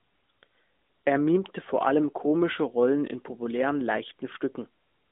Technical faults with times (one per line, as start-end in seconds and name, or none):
none